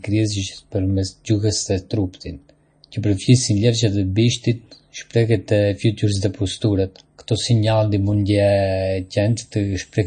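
Heavy MP3 compression at a low bitrate, likely around 32 kbps, has starved the encoder of bits throughout. It has cut the treble at 9.1 kHz and let weak frequency lines flicker between frames, so the speech sounds dull, watery and swirly, with chirpy, smeared s sounds.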